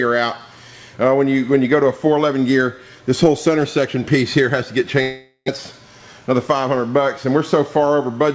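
From 5.02 to 5.50 s, the last sound is drawn out as a fading buzz that sinks into about 30 ms of near-silence. This is likely a long network dropout: roughly 400 ms of audio never arrived, so playback resumes further on with that part gone. A spectrogram shows smeared, decaying bands and then an empty strip. The timing shifts by around 40 ms.

From 6.07 to 6.55 s a jitter buffer speed-up runs the audio at 108% speed without changing pitch. About 50 ms in total is cut out as many short pitch-period pieces, so it sounds hurried. The waveform shows closely spaced splices, and the spectrogram, which holds nothing above 8 kHz, looks slightly compressed in time over that stretch.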